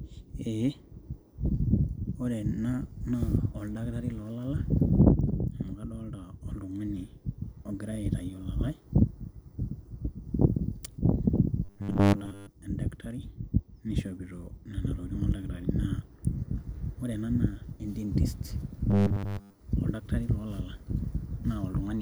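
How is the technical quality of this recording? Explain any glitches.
Two short glitches disrupt the speech. From 11.65 to 12.48 s and again from 18.91 to 19.59 s, the voice becomes a rigid 100 Hz metallic buzz: robotic sound from repeated short buffers, likely caused by 10 ms blocks looping while most of the real audio is dropped.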